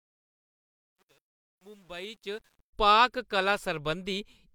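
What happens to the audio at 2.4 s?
At 2.4 s you're near the tail of truncation distortion on the fade-in, which runs from 0.0 to 2.73 s. The stage doing the fade drops to too few bits without dither, which fits roughly a 9-bit word length, so the quiet parts of the waveform collapse into coarse steps. It's grittiest from 0.0 to 2.33 s. By 2.4 s the level is high enough that the grain is easing off, and the distortion ends at 2.73 s.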